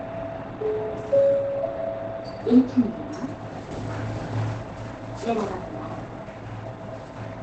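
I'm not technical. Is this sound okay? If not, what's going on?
No. Opus compression, running from start to finish, likely explains what you hear: the sound is muffled and hoarse throughout. This kind of compression shrinks audio to save space, and here it has switched into a mode built for talking rather than general sound. That mode throws away everything above about 8.8 kHz, so the bright, crisp top end is simply missing, and what remains has a hoarse edge that is plainly audible.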